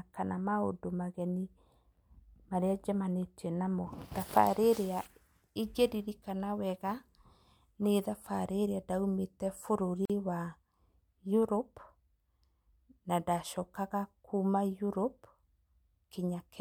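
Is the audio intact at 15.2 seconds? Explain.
Yes, the speech is intact at 15.2 seconds, with no audible fault at that moment.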